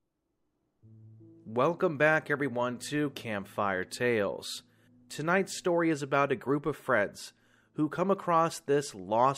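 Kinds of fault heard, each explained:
No faults can be heard.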